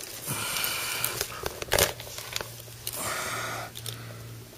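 No technical faults can be heard anywhere in the clip.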